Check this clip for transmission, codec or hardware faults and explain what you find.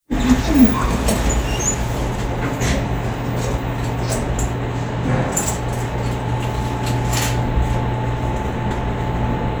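Nothing in the audio points to a transmission, codec or hardware problem, so there are no faults to report.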